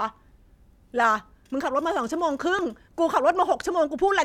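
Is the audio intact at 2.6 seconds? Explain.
No, at 2.59 s there is a tiny jump as a millisecond or two of audio vanishes, likely a dropped buffer (overrun) joining both sides directly.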